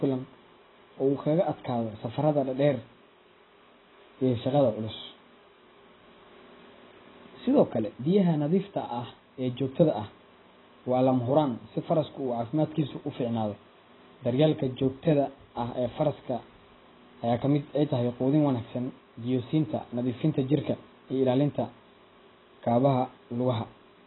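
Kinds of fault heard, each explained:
AAC compression: the speech sounds dull and smeared throughout, with nothing above 4 kHz and a warbling, fizzy texture on sibilants, likely from heavy AAC-LC coding around 16 kbps. A simple low-pass filter would leave the remaining band clean, not swirly.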